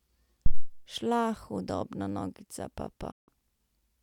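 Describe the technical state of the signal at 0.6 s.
A phantom power thump runs from 0.46 to 0.72 s, so 0.6 s falls inside it. A supply switching on a live input sends a voltage step through the coupling capacitors, heard as a deep low thump whose tail dies away with a decay of about 59 ms. On the waveform it appears as a sudden offset swing that relaxes back toward centre. On a spectrogram it is a dark burst concentrated at the very bottom of the frequency range.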